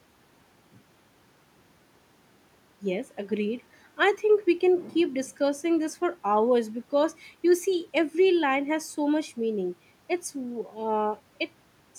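Listening to this speech recording, nothing technical stood out at any point.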